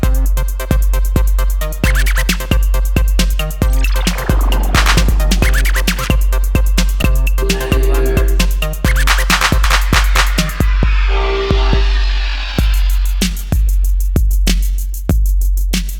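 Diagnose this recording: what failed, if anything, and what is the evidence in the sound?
Damaged data in the compressed stream, so a codec or storage issue. There are three short blips, at 3.32, 7.01 and 9.64 s, each a very brief glitch. That's the decoder hitting corrupt frames, losing sync and hunting for the next frame header.

From 11.94 s to the end there's a time-stretched section. The pace suddenly drops to about 0.72 times speed while the pitch holds, and it drags. That's most likely software stretching the tail to fill a set length by repeating short slices.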